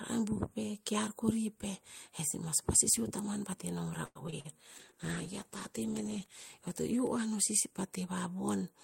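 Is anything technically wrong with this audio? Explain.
Yes, there are two problems, back to back from about the middle of this speech clip.

From 4.05 to 4.54 s there's repeated packet loss, giving that robotic sound. Over that half-second you get four separate dropouts, the longest about 100 ms. Each time data went missing, the receiver stretched the last bit of sound to cover the hole, about 170 ms of patching in total, with roughly 80 ms left as real gaps. Around 41% of that stretch is concealment, so it comes across choppy.

Then from 4.74 to 7.54 s there's a call bitrate drop. The bandwidth estimate fell and the encoder got squeezed, which sounds like a fall from roughly 48 kbps down to around 15 kbps. At that rate the coding gets coarse and the top end is trimmed, so the speech turns rough, watery and a bit muffled. It's at its worst for about 1.5 s before it recovers.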